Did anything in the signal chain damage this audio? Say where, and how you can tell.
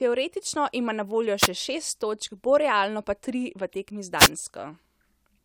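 Yes: wireless microphone noise hits at 1.38–1.48 s and 4.17–4.29 s, short static bursts from the radio link as multipath fades let receiver noise through.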